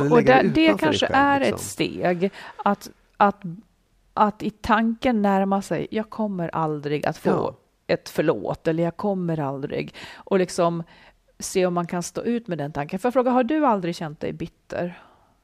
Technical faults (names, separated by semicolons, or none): none